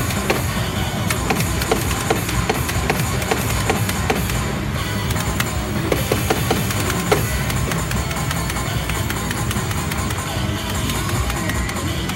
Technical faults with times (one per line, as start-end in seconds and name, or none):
4.81-10.15 video or display buzz